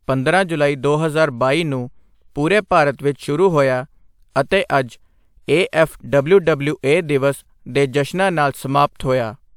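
Speech recording, no technical faults detected anywhere in the clip.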